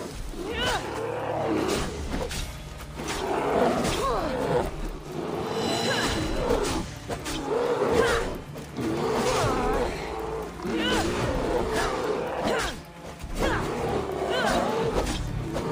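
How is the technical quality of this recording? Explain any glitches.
No glitches or technical faults are heard anywhere here.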